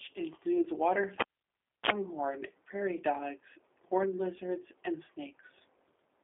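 From the first moment to the last, the whole speech clip carries G.729 codec damage, and it's plainly audible. The band is squeezed to a phone line, roughly 300 Hz up to 3.5 kHz, with nothing at all above that, and the rough, slightly synthetic texture points to an 8 kbit/s coder like G.729A rebuilding the speech from a filter model plus a handful of pulses per frame rather than sending the actual waveform.

At 1.20 s the cable gets pulled and plugged in. You hear a pop as the contact breaks, then about 0.66 s of near silence while nothing's connected. Just before the return there's a short burst of 60 Hz mains buzz, around 43 ms, as only the plug tip touches and picks up hum. A second pop at 1.90 s marks the connection seating properly and the sound coming back.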